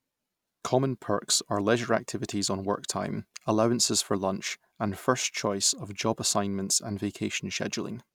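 No technical faults can be heard anywhere in the recording; the signal stays continuous and steady throughout.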